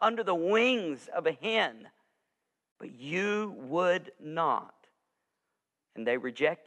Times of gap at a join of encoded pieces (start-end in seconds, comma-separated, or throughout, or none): 2.72-2.76